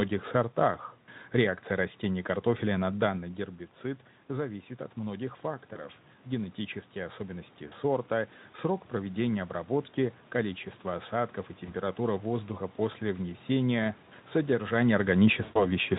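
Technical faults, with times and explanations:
5.73–5.86 s, 7.67–7.73 s, 11.65–11.73 s (between "обработки количество осадков и" and "воздуха после внесения содержание") and 15.43–15.66 s (after "воздуха после внесения содержание"): VoIP packet loss concealed by the speech codec. Gaps of 20, 40, 20 and 120 ms are filled with a buzzy or noise-like, fading extrapolation that stays weak after audio resumes, unlike a clean dropout or a talker turning away.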